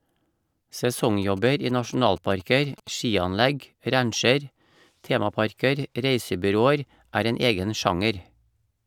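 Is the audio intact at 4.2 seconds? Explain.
Yes, at 4.2 s the speech plays through intact, with no dropout, click, distortion or other fault at that moment.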